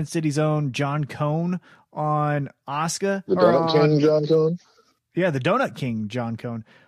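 No technical faults can be heard anywhere in the speech.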